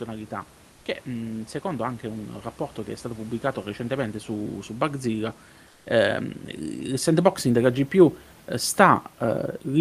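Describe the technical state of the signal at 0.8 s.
At 0.8 s, comfort noise replaces the background from 0.71 to 0.85 s. The real room sound becomes a steady, featureless hiss, about 2 dB quieter. Likely cause: Opus discontinuous transmission.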